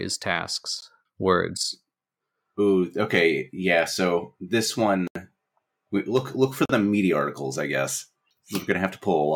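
At 0.81 s, 5.07 to 5.15 s and 6.65 to 6.69 s the speech drops into a block of digital silence (14, 80 and 40 ms), likely where the output wasn't filled in time, so the sound cuts out and back with no fade.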